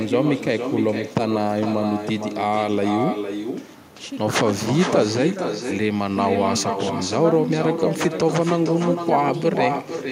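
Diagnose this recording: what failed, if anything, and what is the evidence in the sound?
Call processing failed: echo with no canceller. Throughout, the speech returns about half a second later, about 6 dB down and thinner, looped from the far-end loudspeaker.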